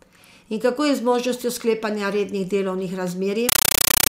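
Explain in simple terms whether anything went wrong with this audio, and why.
Compressed stream played as audio, from 3.49 s to the end: the speech gives way to very loud, chattering static. A Dolby Digital stream was treated as ordinary sound instead of being decoded, so each data packet plays as a burst of noise, about 31 bursts a second.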